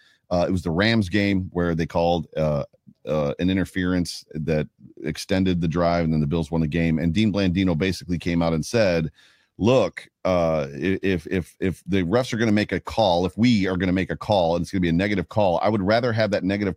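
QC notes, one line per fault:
No faults heard in this recording.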